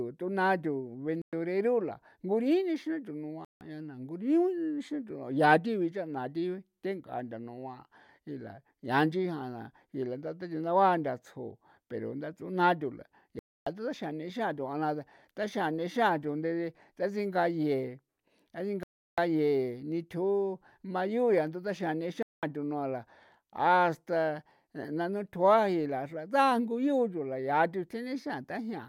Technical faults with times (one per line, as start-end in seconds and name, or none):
1.22-1.33 Bluetooth stall
3.45-3.61 Bluetooth stall
13.39-13.67 Bluetooth stall
18.83-19.18 Bluetooth stall
22.23-22.43 Bluetooth stall